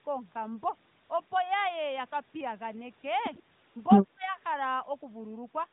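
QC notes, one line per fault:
1.04–1.10 s and 3.70–3.76 s, AMR comfort noise: two brief pauses, each about 60 ms, where the real background drops out and a smooth, even hiss takes its place, switching in and out abruptly. During these gaps no speech frames were carried; the receiver synthesised filler noise from a coarse estimate of the background level and spectral shape, so the texture is too uniform and the transitions at each edge are audible.
3.37–3.41 s, echo leak: a very faint, short scrap of the voice reappears about 100 ms behind the original, far below the main speech level. It is most likely loudspeaker echo from the far end that the echo canceller did not fully remove, picked up by that side's microphone and returned down the line.
4.04–4.26 s, speech suppressed in double talk: the voice dips sharply for roughly 200 ms, falling by as much as about 35 dB at its deepest point before recovering. 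The likely cause is both parties talking at once, with the echo canceller unable to separate near-end speech from loudspeaker echo and attenuating everything it received. The stretch is heard through the 4 kHz-limited AMR narrowband channel.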